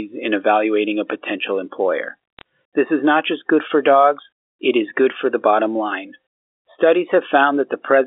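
Speech over a phone line, and just after "evaluating a potential employer" there's a quick crackle of sharp ticks from about 2.39 to 2.42 s. That's bit errors on a digital phone line: a few flipped bits in the G.711 mu-law stream, each changing one sample.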